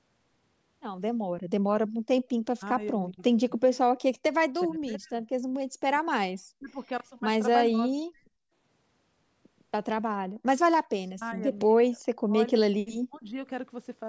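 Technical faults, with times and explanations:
2.51–3.5 s, 4.65–5.26 s, 6.48–6.77 s, 7.68–8.32 s, 10.68–11.45 s, 11.83–12.32 s and 12.85–13.38 s: speech suppressed in double talk. The speech drops sharply, by up to about 40 dB, in short broken patches, likely because the echo canceller mistook it for loudspeaker echo while the far side talked.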